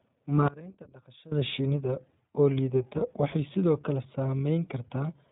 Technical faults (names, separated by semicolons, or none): iLBC codec; one channel inverted